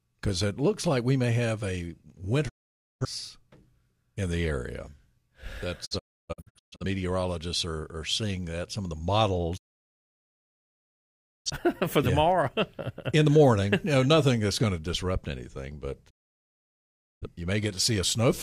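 Digital broadcast dropouts mute the speech after "we may have a" at 2.48–3.05 s, in scattered holes at 5.85–6.85 s, at 9.56–11.50 s, and after "to disrupt anything but" at 16.09–17.27 s. The receiver lost valid frames and muted with 20 ms fades. Unlike a network stall, the speech resumes further on, with the lost audio skipped rather than delayed.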